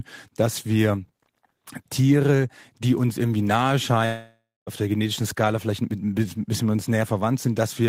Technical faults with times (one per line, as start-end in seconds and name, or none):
4.05-4.69 long network dropout